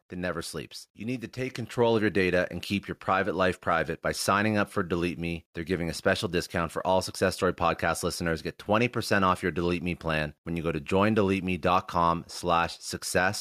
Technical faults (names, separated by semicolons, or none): microphone volume stepped up